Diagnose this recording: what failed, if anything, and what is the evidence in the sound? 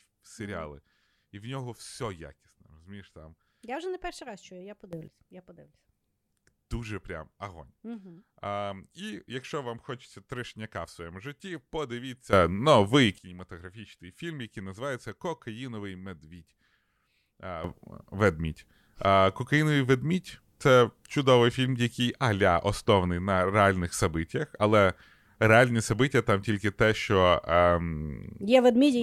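A sudden gain jump appears three times in this speech. Just after "перший раз чую я", level rises about 13 dB from 4.93 to 5.08 s, again about 15 dB from 12.33 to 13.18 s, and about 12 dB from 17.64 s to the end. The step is likely a digital gain change in the processing chain applied without a ramp. Unlike automatic gain control, which slides and makes the background pump, here the speech and the background noise step up together in a single instant.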